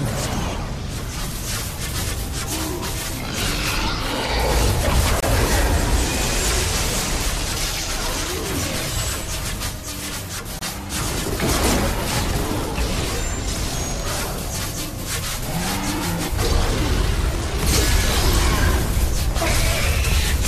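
Two abrupt dropouts, a corrupt frame muted each time: about 32 ms of silence at 5.20 s and about 42 ms at 10.59 s, each consistent with one damaged compressed frame being discarded. On the waveform and spectrogram, each appears as a hard-edged blank gap, with timing intact around it.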